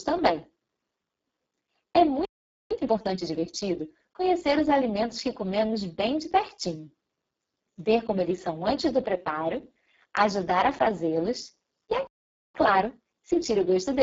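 Throughout, the speech sounds hoarse, noisy and partly robotic, with nothing above 7.7 kHz and the upper band reduced to a hissy, shaped fill. That is the Speex codec at a very low setting, which fits roughly 6 kbps, leaving too few bits to rebuild the excitation properly.

From 2.71 to 4.53 s and again from 12.55 to 13.99 s, the speech hurries at 1.25 times normal speed without any pitch change. This is time-compressed catch-up: after a stall, the player trims its backlog by removing short slices and cross-fading the joins.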